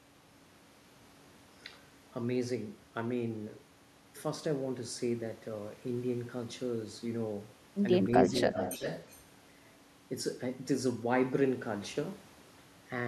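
From 8.39 to 9.23 s, a delayed copy of the speech returns about 360 ms late, roughly 10 dB below the direct voice. This is an echo leak, likely from a far-end loudspeaker whose echo canceller let part of the pickup through.

Between 8.5 and 8.84 s, while that echo overlaps, the talker's own voice dips by around 10 dB in brief pieces, about a tenth of a second in all. This is speech suppressed in double talk, likely the canceller turning down both signals at once.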